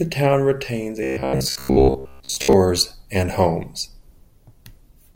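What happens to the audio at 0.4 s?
Nothing goes wrong at 0.4 s; the speech carries on intact through that moment.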